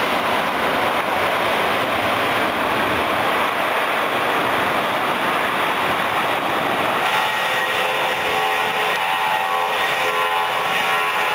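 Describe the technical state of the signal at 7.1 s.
At 7.1 s you're right in the middle of gain pumping, which runs through the whole clip. The level keeps dipping and recovering by around 5 dB, so loud and soft parts sit squashed together. That's likely a fast limiter or compressor clamping down on input gain set way too high.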